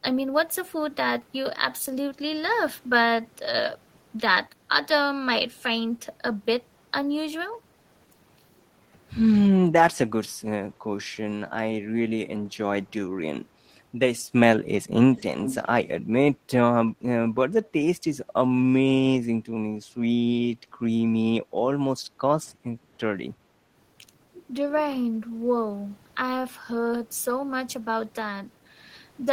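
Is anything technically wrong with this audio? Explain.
Yes, two things. At 15.15 to 15.22 s and again at 15.42 to 15.67 s there's echo leak: a copy of the speech trailing about 329 ms behind, low at first, then louder (roughly 10 dB down). Likely the far end's echo canceller on a speakerphone let some of its loudspeaker pickup slip back.

Then at about 22.8 s the background gets gated by the echo canceller: the room sound dips by about 6 dB for roughly a tenth of a second, because the canceller clamped the microphone while the loudspeaker was active, then let go.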